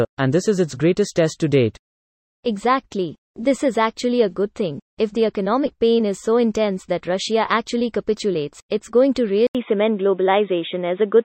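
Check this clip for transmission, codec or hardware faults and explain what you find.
One fault, near the end. At 9.47 s, after an 80 ms gap, the band suddenly stops at 3.8 kHz through 11.25 s, with a new noise floor roughly 45 dB down at a similar level. That points to the input likely being switched to a poorer device, whose narrower response dulls the sound.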